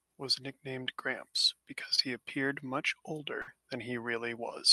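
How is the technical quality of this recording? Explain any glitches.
The speech comes through a call path with two audible dropouts, and its top end stops at about 12 kHz, which points to a band-limited Opus stream.

From 1.95 to 2.00 s, just before "he appeared much", there is a brief smear where the sound wobbles instead of moving on. This is short concealed packet loss: about 20 ms never arrived in time, so the receiver stretched the previous sound over roughly 23 ms and blended back.

From 3.42 to 3.49 s, right after "he appeared much", the sound freezes into a held buzz or fading hiss and then resumes slightly further along. This is a burst of packet loss: about 60 ms went missing, and the decoder filled about 56 ms by extending and attenuating the last sound, so that stretch is simply absent.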